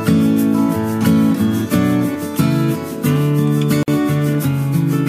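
At 3.83 s the continuous sound drops out for about 50 ms with smeared edges, then resumes exactly where it stopped. This is a gap at a join of encoded pieces: separately encoded segments, apparently 4.0 s long, were concatenated untrimmed, leaving encoder delay and final-frame padding in.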